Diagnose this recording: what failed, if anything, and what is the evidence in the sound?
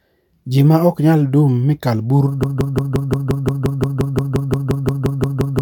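From 2.43 s, right after "nyal dum mi kal", a 175 ms fragment of the speech repeats exactly, back to back, about 18 times until the clip ends. This is a broken-record loop, likely from a stalled player or stream buffer resending its last fragment while the following audio was lost.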